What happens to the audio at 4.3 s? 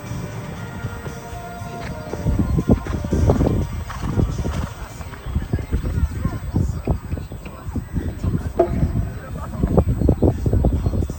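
A steady, high fixed-pitch whine at 8 kHz, strongest at 16 kHz and about 25 dB under the signal, runs through 4.3 s: USB whine, leaking from the bus's microframe current draw.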